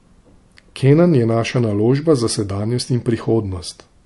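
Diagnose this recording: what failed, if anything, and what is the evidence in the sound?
The codec stage likely failed: the speech went through MP3 compression at too low a bitrate, with plainly audible damage that fits roughly 50 kbps. Short of bits, the encoder dropped everything above 11.3 kHz and discarded the quieter spectral detail, so components flicker in and out from frame to frame. Throughout the recording, the top end is dull and the sound has a watery, swirling texture, with chirpy, metallic sibilants and smeared consonant onsets.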